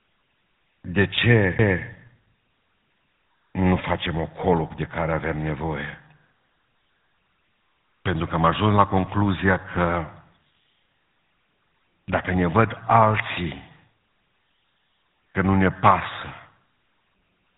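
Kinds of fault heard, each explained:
GSM full-rate codec: a pulse-excited vocal-tract model leaves the speech buzzy and gravelly throughout, and the spectrogram shows nothing above about 3.9 kHz, consistent with 13 kbps.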